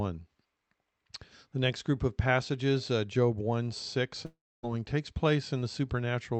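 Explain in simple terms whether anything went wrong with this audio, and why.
From 4.25 to 4.65 s, the speech fades into a buzz, then silence, and resumes with a piece missing. Likely cause: a long network dropout.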